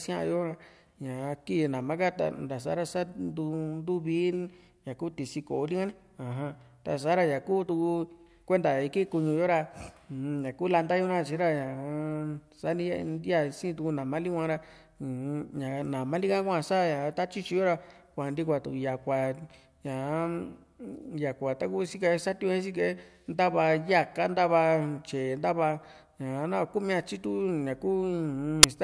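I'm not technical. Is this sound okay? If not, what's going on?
No. File tags played as audio at 28.63 s: the player read the embedded cover picture as sound, giving a very loud, instant burst of static.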